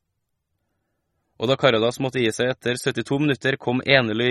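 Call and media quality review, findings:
MP3 compression artefacts, whole clip. Speech sounds watery and swirly, s sounds chirp metallically, nothing above 12.9 kHz. Likely a starved MP3 encoder, fitting a low bitrate around 32 kbps: treble cut at fixed frequency, weak lines dropping frame to frame.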